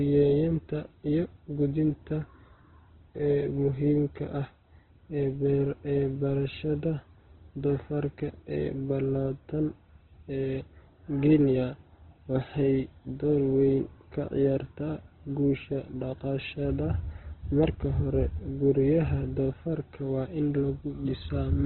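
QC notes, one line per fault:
throughout — Opus compression: the speech was likely encoded with Opus at a rate that fits about 12 kbps, in its CELT music mode squeezed to narrowband. Nothing remains above 4.1 kHz, so it sounds dull, and heavy band filling leaves tones rough, grainy and noisy.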